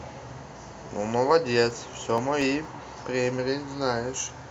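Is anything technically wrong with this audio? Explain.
Yes. From 1.71 to 2.65 s, five CD scratch ticks interrupt the speech. A scratch defeats error correction each rotation, leaving very brief, regular clicks.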